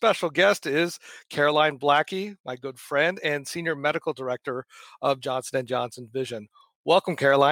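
No technical faults can be heard anywhere in the recording, and the signal holds steady throughout.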